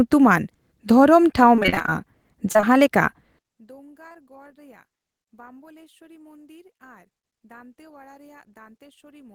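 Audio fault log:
1.55–1.91 s, repeated packet loss (robotic sound): a rapid string of holes, none longer than about 29 ms, leaves nearly half of this stretch patched by continuing the last sound. The stacked repeats give a choppy, robotic texture, unlike an isolated single smear.
2.53–2.65 s, short concealed packet loss: three back-to-back 20 ms holes are bridged by extending the preceding sound and then blending back into the real audio. The result is a brief smear or wobble of about a tenth of a second, not a sustained robotic stutter.
4.09–4.16 s, short concealed packet loss: two consecutive 20 ms holes are filled the same way, giving a short wobble where a brief sound can drop out. It is far more contained than the choppy run at 1.55 s.
3.39 s to the end, one channel inverted: the centred content falls by about 33 dB in mono and leaves a faint residue. This is likely one stereo channel with reversed polarity cancelling against the other, which is a steady loss of level rather than gaps or smearing.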